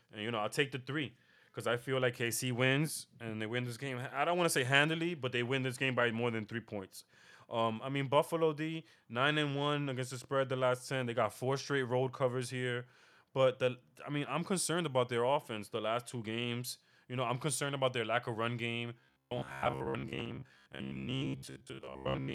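From 19.00 s to the end at 22.34 s, the speech takes on robotic sound from repeated short buffers. The voice collapses into a rigid, metallic buzz near 66.7 Hz that roughly tracks the syllables. The likely cause is audio arriving too slowly, so playback keeps looping a short fragment, about 15 ms given that buzz rate, while most of the real signal, around seven tenths, is skipped.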